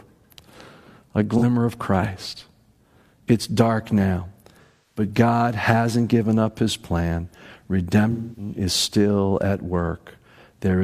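At 1.38 s the speech briefly turns smeared and phasey for about 43 ms, which fits a single lost frame. From 4.62 to 5.03 s and again from 8.12 to 8.53 s, longer stretches of roughly a quarter-second go noisy and hollow, dip away, then fade back in. This is AAC frame loss with concealment: the decoder patches each gap by reusing the last good spectrum, then fades the patch as the gap lengthens.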